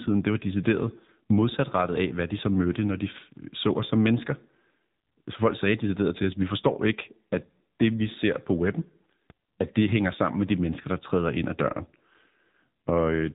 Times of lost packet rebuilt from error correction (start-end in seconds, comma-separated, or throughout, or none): none